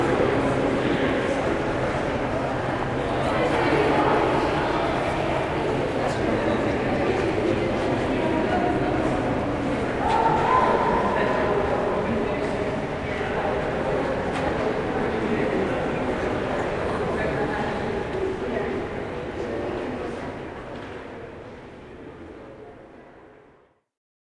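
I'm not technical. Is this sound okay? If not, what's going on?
No. From 3.26 to 6.12 s the sound suddenly runs fast and high, then returns to normal. This is a wrong sample rate fault. The audio is played back quicker than it was captured, with no correction. Speed and pitch rise together. Here everything runs about 1.09 times too fast and sits about one and a half semitones higher. That fits audio recorded at 22 kHz but played at 24 kHz.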